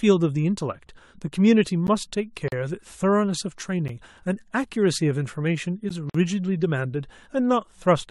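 At 1.87 s there's a gap between chunks: a 12 ms hole cut into the speech. It's the first of three identical ones, with the others at 3.88 s and 5.89 s, so they land on a steady 2-second rhythm. That spacing suggests the audio was delivered in 2-second chunks and something at each join, probably codec padding or a player starting the next chunk a touch late, left a sliver of silence. Nothing is missing. The flow just stutters briefly.

In between, at 2.48 to 2.52 s, there's a gap at a join of encoded pieces, a dropout of about 40 ms. A second one follows at 6.10 to 6.15 s, lasting about 50 ms. Here separately encoded pieces were spliced without trimming, so the encoder's start-up delay and the padded final frame both stayed in as dead air. The edges are softened by the codec rather than razor-sharp, and the speech picks up exactly where it left off.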